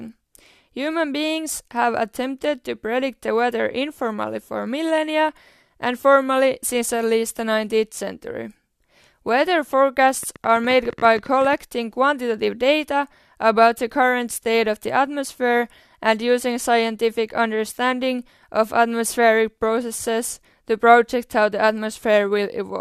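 A train of clicks runs from 10.23 to 11.54 s: around twenty sharp, similar pulses at about 14.6 per second, unevenly spaced and roughly as loud as the speech, heard as a ragged ticking. Interference from nearby equipment or a faulty connection or power supply is the likely cause.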